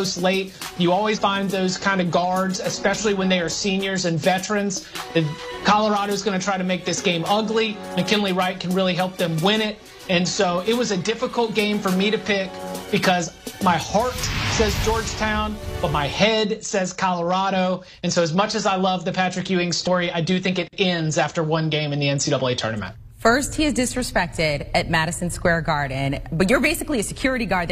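A short burst of damaged data in the compressed stream sounds as a brief glitch from 1.12 to 1.19 s, about 70 ms, where the decoder misreads corrupted frames and loses sync. The waveform shows an abrupt discontinuity there.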